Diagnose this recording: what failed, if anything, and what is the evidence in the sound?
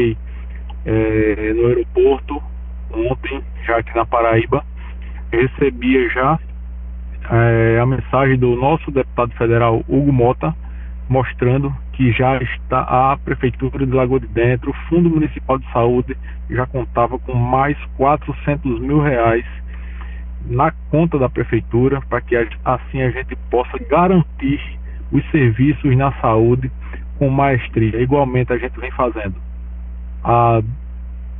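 Aliasing runs through the whole recording, introduced at the sample-rate conversion stage. High-frequency content has been folded back across roughly 3 kHz, so sibilant-like and bright components turn gritty and metallic, with spurious pitches unrelated to the source. The spectrum runs hard up to that edge, which fits a drop from 44.1 kHz to about 6 kHz with no anti-aliasing filter beforehand. The folded energy sits only around 25 dB below the wanted signal.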